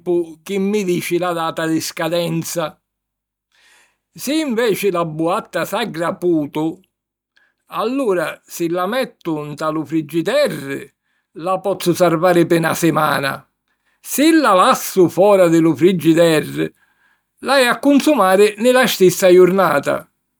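At 11.75 s a sudden gain jump lifts the speech and its background noise together by about 6 dB, holding to the end. A gain setting most likely changed between samples without a ramp; the waveform envelope steps up there, and the spectrogram brightens uniformly across all frequencies.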